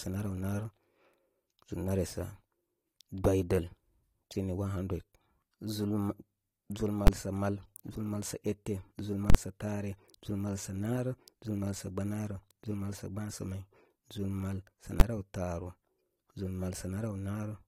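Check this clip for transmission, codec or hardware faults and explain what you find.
There's one fault here, heard three times: invalid numbers at full scale, at 7.07 s, from 9.30 to 9.35 s, and at 15.00 s. Some calculation blew up to infinite or invalid values, and the output got pinned at maximum level for a whole block. The two short ones, about 12 ms each and consistent with a 512-sample block, land as single sharp bangs. The 9.3 s one lasts about 46 ms, consistent with 2048 samples, so you hear a loud pop in and out around a gap in the speech.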